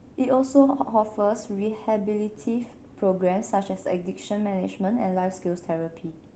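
Speech, with no technical fault heard anywhere in the clip.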